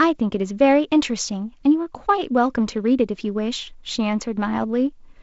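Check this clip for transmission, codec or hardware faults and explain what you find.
No transmission or hardware faults.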